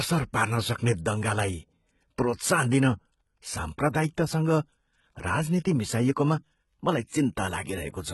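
Throughout, the speech carries heavy HE-AAC compression damage, consistent with a bitrate near 16 kbps. The treble is likely rebuilt by band replication, so s sounds turn gritty and metallic rather than simply dull as under a plain low-pass. Nothing sounds above 11.8 kHz.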